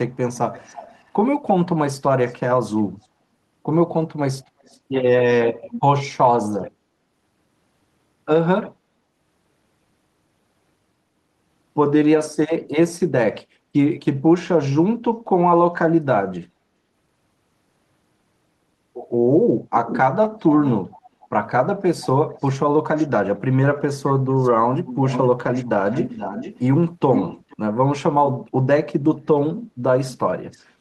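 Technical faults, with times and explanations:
0.14–1.11 s, 2.25–3.06 s, 4.44–5.81 s, 24.07–27.57 s and 30.51–30.64 s, echo leak: a delayed copy of the speech trails by 338 to 483 ms, about 10 to 35 dB down, loudest at 24.07 s. This is likely loudspeaker sound the far-end canceller missed, and it shows on a spectrogram as faint, shifted repeats of the speech harmonics.
13.6–13.73 s, background gated by the echo canceller: the room noise dips by about 7 dB for roughly 150 ms while the microphone is suppressed, visible as a short notch in the noise floor.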